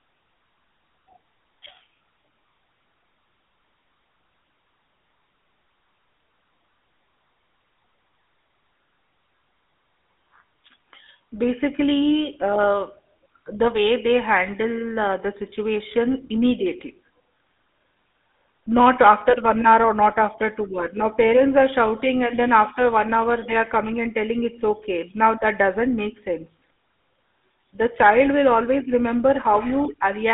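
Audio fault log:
Throughout: GSM full-rate codec. Buzzy, gravelly roughness from pulse-excited vocal-tract coding, consistent with 13 kbps full rate. Band runs about 250 Hz to 3.6 kHz, with nothing above 3.8 kHz.
18.77–19.76 s and 21.20 s: hard clipping. Peaks overdriven by about 4 dB, then about 1 dB, are cut flat. The added high harmonics give crackle on peaks before "or not after two" and a brief crackle after "after two hour now".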